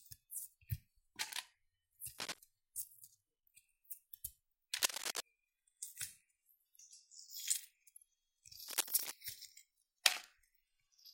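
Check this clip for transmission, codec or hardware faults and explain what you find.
Three bursts of cable scratch noise occur, at 2.19 to 2.39 s, 4.80 to 5.25 s and 8.68 to 9.12 s. Dense, uneven crackling rustles over the sound, roughly level with it and somewhat louder in the middle burst. The likely cause is a worn cable or connector shifting, its contact resistance jumping rapidly.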